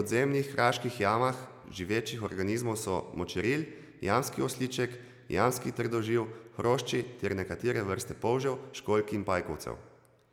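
Listening closely to the speech, nothing stood out as a technical fault at any point.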